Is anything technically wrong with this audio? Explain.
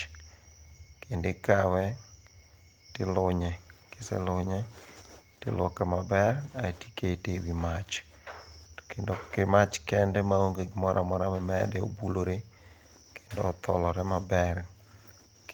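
No, nothing technically wrong can be heard in this speech recording, and the signal holds steady and intact throughout.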